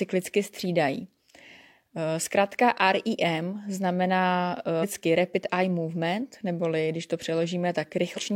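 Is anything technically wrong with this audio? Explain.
Yes. Compressed frames are skipped at 4.79 s and 8.13 s. The speech jumps ahead by roughly 0.7 s, then roughly 0.2 s, which points to whole 46.4 ms codec frames going missing or being rejected.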